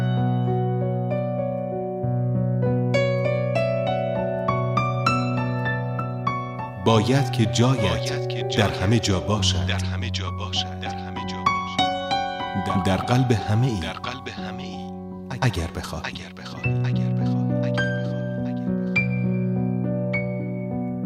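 No technical faults can be heard in this audio.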